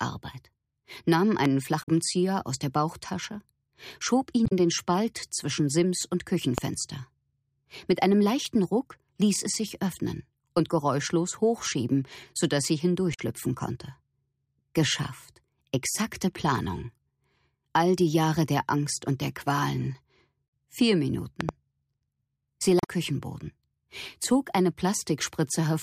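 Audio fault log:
1.45–1.48, 6.58–6.60 and 21.41–21.51 s: loud pop. Sharp single pops at the first two, a quick double pop at the last, each jumping well above the sound, roughly 15 dB over it, while the audio carries on underneath. The likely cause is a sudden voltage step from a plug, switch, static or driver glitch.
1.79–1.88, 4.43–4.53, 13.10–13.20 and 22.79–22.89 s: damaged data in a compressed stream. Each is a short glitch of under a tenth of a second, as the decoder hits corrupt frames, loses sync and hunts for the next valid header.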